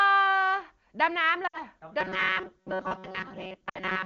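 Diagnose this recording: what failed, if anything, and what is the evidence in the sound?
Lost AMR speech frames (network/radio stage): Two brief dropouts occur, at 1.47–1.61 s and 3.69–3.79 s, each covering about 60 ms, which points to roughly three consecutive 20 ms frames. The decoder reuses the last good pitch and vocal-tract settings at falling gain, so the sound briefly smears and then fades quickly, as is typical for wideband. On a spectrogram, the harmonics freeze flat and darken over that span before the speech returns weakly. The codec itself, AMR-WB at 23.85 kbit/s, adds little or no audible damage of its own.

Robotic sound from repeated short buffers (driver/buffer stage): From 2.01 s to the end, the speech takes on a rigid, metallic buzz at 188 Hz while still loosely tracking the original. That period, about 5.3 ms, fits a short block being replayed again and again while fresh audio arrives too seldom, which is likely a buffer underrun. 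Most of this stretch is repeated material rather than real signal. On a spectrogram, a fixed comb of harmonics at multiples of 188 Hz stays put regardless of the speaker's pitch. In the waveform, short identical segments tile back to back.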